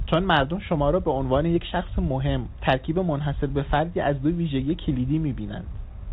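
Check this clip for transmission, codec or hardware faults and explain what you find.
No transmission, codec or hardware faults turn up anywhere in the speech.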